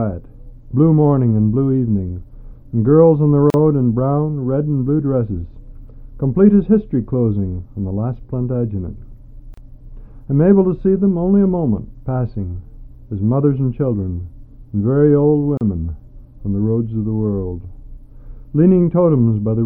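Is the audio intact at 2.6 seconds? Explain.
Yes, the audio at 2.6 seconds is intact, with no dropout, click, distortion or other fault at that point.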